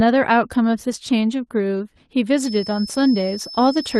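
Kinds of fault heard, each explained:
Feedback whistle: a thin, steady tone at 5.2 kHz sits behind the speech from 2.31 s to the end of the clip, roughly 15 dB below it and swelling and fading slowly in level. The likely cause is a loudspeaker-to-microphone loop held just at the edge of feedback, sustaining one frequency without running away. A spectrogram would show a narrow horizontal line at 5.2 kHz. The waveform would show little change, since the whistle is well below the speech.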